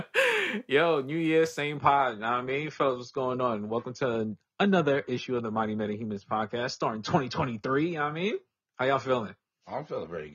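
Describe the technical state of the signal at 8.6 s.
At 8.6 s the speech is inside a stretch played from an adaptive stream at a lower bitrate, which runs from 1.77 s to the end of the clip. At 1.77 s the player switched abruptly, with no gap, to a cheaper encoding. Codec artefacts rise here, which fits a drop from roughly 96 kbit/s AAC down to around 24 kbit/s.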